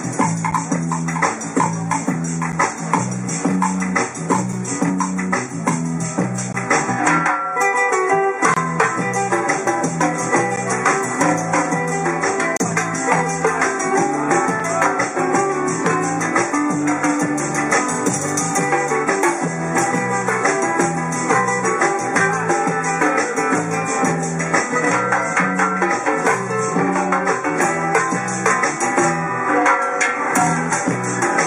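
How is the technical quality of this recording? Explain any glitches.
The recording has a recurring glitch: a gap between stream segments, a brief hard-edged dropout to silence every two seconds, at 0.51, 2.52, 4.53, 6.53, 8.54 to 8.57, 10.56, 12.57 to 12.60 and 14.60 s. Adjacent 2-second segments don't quite meet in time, so the player pads the gap with silence, from 4 to 31 ms. Nothing is lost, but you hear short, regular holes.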